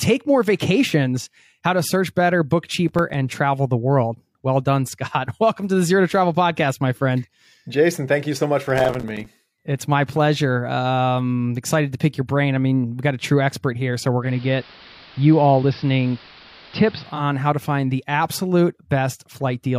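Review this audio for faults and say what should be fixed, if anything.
Processor overload crackle shows up twice in this speech clip, first from 2.89 to 3.14 s and then for longer from 8.67 to 9.26 s. The machine couldn't finish its small audio buffers on time, and the spacing of the dropouts fits buffers of around 5 ms. Each missed buffer left a hard-edged gap of silence. A handful of these hit in the first burst and about twenty in the second, so they run together into gritty crackle. To prevent it, give the audio thread more headroom or use larger buffers.

Digital radio blending to analogue happens between 14.21 and 17.25 s. The receiver lost the digital stream and cross-faded, over about 0.2 s, to the AM broadcast of the same station, then came back at the end. Hiss sits roughly 25 dB below the signal, and the level shifts by about 1 dB. The fix is better digital reception or a feed that doesn't fall back to analogue.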